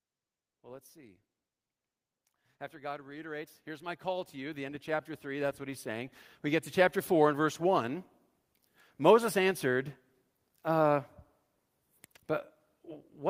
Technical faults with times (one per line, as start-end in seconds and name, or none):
2.70-7.37 automatic gain rising